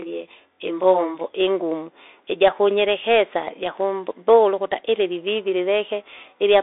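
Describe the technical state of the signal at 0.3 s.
At 0.3 s two faults overlap. A channel delay with comb filtering runs from 0.00 to 1.21 s: one channel lags the other by around 20 ms, and when the two are summed to mono, sound common to both cancels at evenly spaced frequencies. The first notch falls near 20 Hz, with more packed closely up the band, giving a rough, slightly doubled sound. Unlike a codec's band limit, this is a fixed pattern of many narrow notches that disappears after 1.21 s.

Underneath, present for the whole clip, is the Bluetooth CVSD headset codec at 64 kbps. It codes each sample as a single up-or-down bit with an adapting step size. The line band is about 300 Hz to 3.7 kHz, with nothing above 3.8 kHz, so the speech sounds narrowband and boxy. The damage is plainly audible: a granular hiss sits under the speech, s sounds turn scratchy, and loud high sounds distort where they outrun the step. 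This grainy slope-overload texture is what sets CVSD apart from a plain low-pass filter.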